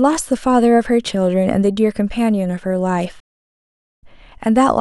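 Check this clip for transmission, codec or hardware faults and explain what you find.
One fault is audible: a stream reconnect. At 3.20 s the speech cuts to silence, returning at 4.03 s about 30 ms further along. The connection dropped, then a fresh decoder restarted mid-stream.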